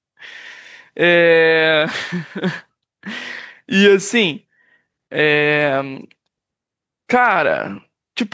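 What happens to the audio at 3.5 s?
At 3.5 s, as throughout the clip, the background swells between loud moments and ducks by a few decibels under each one. This gain pumping is likely from excessive input gain being pulled down by a fast limiter.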